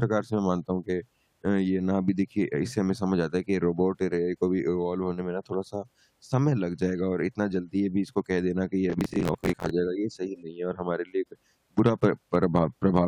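From 8.90 to 9.71 s the processor falls behind and cannot finish its audio buffers on time, missing deadline after deadline. The buffers appear to be around 10 ms each, and roughly thirty go unfinished. Each miss replays a scrap of old audio with hard edges, so this stretch of speech is overlaid with a gritty, tearing processor overload crackle that ends when the load eases at 9.71 s.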